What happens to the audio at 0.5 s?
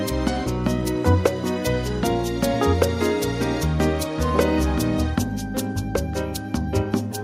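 Nothing goes wrong at 0.5 s: the audio plays through that moment intact, with no dropout, click or other fault.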